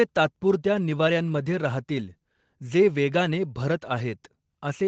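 No faults in this speech clip; nothing is heard above 8 kHz, which fits the band limit of a normal call path with its microphone processing and codec working as expected.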